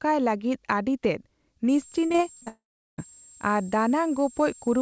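From 1.69 s to the end, a switching supply whistle sits at 7.4 to 7.5 kHz. It is a thin high tone, around 20 dB below the speech.

Between 2.06 and 2.48 s, repeated packet loss makes the speech choppy and robotic. Six short holes, the longest 41 ms, are patched with repeated sound.

From 2.48 to 3.00 s, the sound smears briefly, then goes silent for about 0.39 s. Half a second is missing, likely from a long network dropout.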